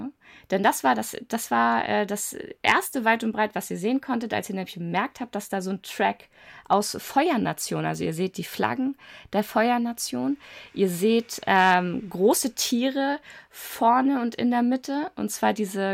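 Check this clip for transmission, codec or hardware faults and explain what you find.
There's one problem: hard clipping. Peaks overran the signal path and got cut flat, giving brief crackly distortion at 0.65–0.68 s, 2.68–2.72 s (the worst, overdriven by about 7 dB), 6.73 s and 11.51–11.74 s.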